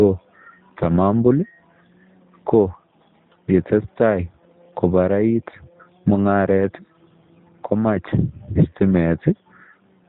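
From the start of the speech to its end, the audio carries plainly audible G.729 codec damage, consistent with the G.729A variant at a bitrate that fits 8 kbit/s. The codec discards the waveform and resynthesises each 10 ms frame from a vocal tract filter, a pitch predictor and a sparse set of pulses, so the speech comes through with a rough, slightly buzzy, synthetic texture. Nothing is present above 4 kHz, which leaves sibilants dull and the overall tone muffled.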